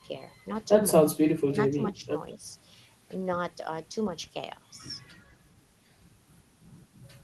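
The speech dips sharply at 1.13 to 1.29 s, 1.46 to 2.13 s and 2.35 to 2.44 s, by up to about 20 dB. These gain drops, rather than hard packet-loss gaps, are likely speech suppressed in double talk.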